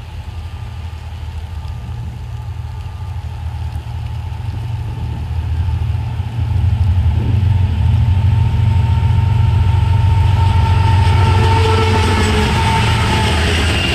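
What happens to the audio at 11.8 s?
At 11.8 s the DECT cordless phone buzz is present, as it is across the whole clip. A nearby handset or base station's 10 ms radio bursts are rectified by the audio circuitry, giving a thin, steady 100 Hz buzz with dense harmonics, sitting roughly 35 dB below the signal.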